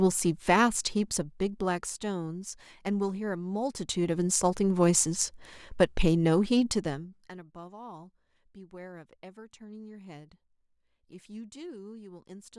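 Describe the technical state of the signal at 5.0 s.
At 5.0 s the speech signal is intact, with no dropout, distortion or other fault.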